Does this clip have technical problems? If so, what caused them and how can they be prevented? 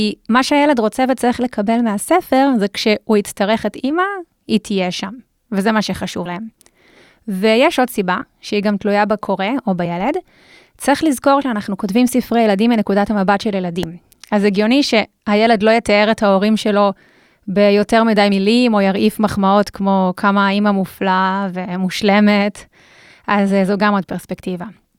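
Yes. Compressed frames skipped at 6.25–6.30 s, 8.21–8.26 s, 9.85 s, 11.41–11.43 s and 18.31 s: the speech jumps ahead by whole 20 ms frames, about three frames (around 70 ms) at the first two and two frames (around 40 ms) at the rest. Checking file integrity after transfer and using a transport with error protection or retransmission would keep damaged or missing frames from reaching the decoder.

Loud pop at 13.83–13.85 s: a single sharp pop, roughly 10 dB above the speech, sits on top of the audio while the speech carries on underneath. This is likely a sudden voltage step from a plug, switch, static discharge or driver glitch, shaped by the circuits after it. Securing connectors, avoiding switching or static near the gear during recording, and keeping audio drivers stable would prevent it.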